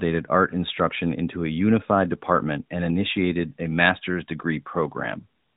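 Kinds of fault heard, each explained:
No faults are heard anywhere in this speech.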